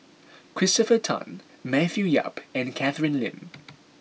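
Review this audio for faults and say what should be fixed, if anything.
Nothing here needs fixing; I listened for technical faults in this speech recording and didn't hear any.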